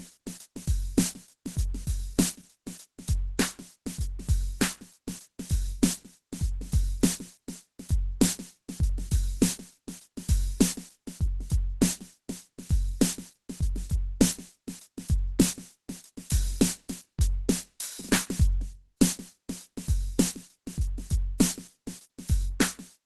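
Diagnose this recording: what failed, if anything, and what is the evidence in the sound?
Throughout the music the sound is muffled and hoarse, with grainy, rough tones and nothing above about 12.1 kHz. This points to the codec stage, likely Opus compression at a low rate near 16 kbps, where the encoder has dropped into its hybrid speech-oriented mode.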